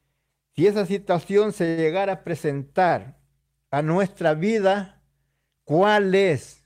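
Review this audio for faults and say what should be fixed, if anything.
Short stalls from a late packet occur at 1.65 to 1.69 s and again from 1.69 to 1.79 s, just after "esa situación se", then at 2.89 to 2.92 s. Each time the jitter buffer ran dry, so the receiver held the last sound, for 18 ms, 79 ms and 18 ms, until the packet turned up. No audio is lost, but the speech drags slightly and timing shifts later. To prevent it, allow a deeper or adaptive jitter buffer.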